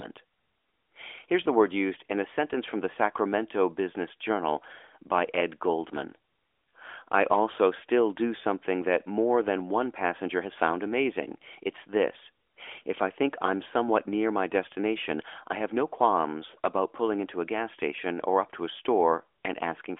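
Speech, with no technical faults to report. It comes through an AMR narrowband mobile codec path with nothing above about 3.7 kHz and the light coding texture that fits the 12.2 kbps mode.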